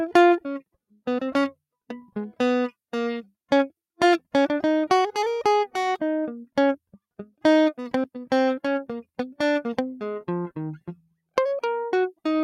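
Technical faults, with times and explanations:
8.04 s, CD skip: the music drops out for a few milliseconds with a tick, then resumes from a different point in the track. A knock or a disc flaw has sent the laser onto another turn of the disc's spiral, so playback jumps discontinuously rather than continuing.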